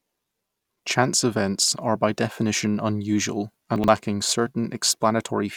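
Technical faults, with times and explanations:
1.64–1.72 s and 3.76–3.88 s, chunks out of order: A 40 ms piece of the speech plays one chunk late, then another plays two chunks late. Nothing is missing, but the sequence is swapped. The three abrupt joins give each moment a jumbled sound.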